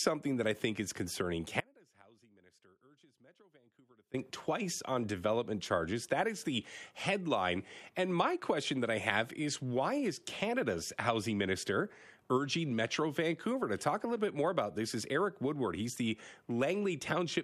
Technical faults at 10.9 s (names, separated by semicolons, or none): none